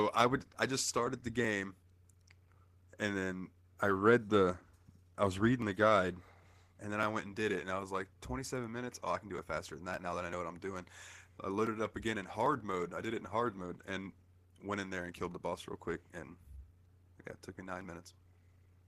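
No technical faults can be heard anywhere in the speech recording. Nothing in the audio stands out as a problem to mark at any point.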